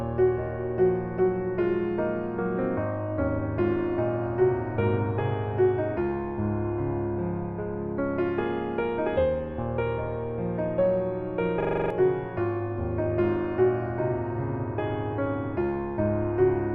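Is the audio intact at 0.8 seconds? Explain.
Yes, at 0.8 seconds the audio is intact, with no dropout, click, distortion or other fault at that moment.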